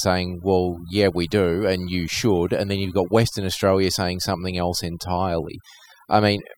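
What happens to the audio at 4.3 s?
At 4.3 s you're hearing overdone noise removal, present across the whole clip: bands near the noise floor get gated out, leaving twinkly near-silence.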